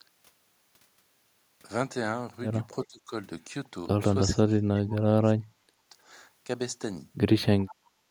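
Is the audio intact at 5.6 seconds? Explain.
No. At 5.6 seconds the speech sits inside a stretch of speech suppressed in double talk, running from 4.3 to 5.95 s. The level sinks by as much as about 35 dB, most likely because an echo canceller, faced with both sides talking, could not tell this talker from loudspeaker echo and attenuated everything. On a waveform the envelope sinks through that stretch.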